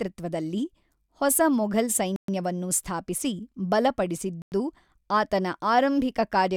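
A speech clip with two likely Bluetooth stalls, where held-up packets drained the playback buffer: the audio drops to silence after "ಹೊಸ ಮೊಘಲ್" from 2.16 to 2.28 s (122 ms), and again from 4.42 to 4.52 s (100 ms).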